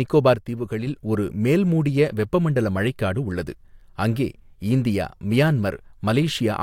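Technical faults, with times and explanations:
0.36–0.87 s, one channel drops out: the speech dips abruptly by about 6 dB right before "ஒரு மேல்மூடிய வெப்பமண்டல மழைக்காடு", likely one stereo side vanishing before the mono fold-down.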